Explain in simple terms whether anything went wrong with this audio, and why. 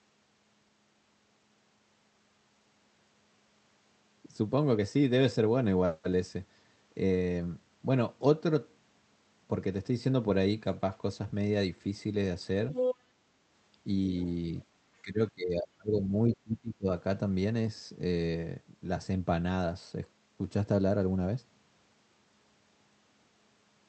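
Two problems show up, both tied to how the call handled echo.

Other side's voice leaking through: from 12.71 to 12.95 s a second voice breaks in, roughly as loud as the main talker. A much fainter scrap follows at 14.19 to 14.3 s. The likely cause is that the talker's loudspeaker played the far end of the call, the microphone picked it up, and the echo canceller failed to strip it out before sending.

Speech suppressed in double talk: from 15.02 to 16.14 s, and again from 16.35 to 16.87 s, the talker's voice sinks sharply, for about a second and then about half a second. This likely happened because both people spoke at the same time, and the echo canceller could not separate the talker from the loudspeaker echo, so it turned everything down, pulling the wanted speech deep into the background.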